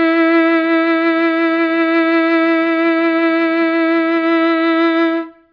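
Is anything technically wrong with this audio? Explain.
No, no technical faults detected.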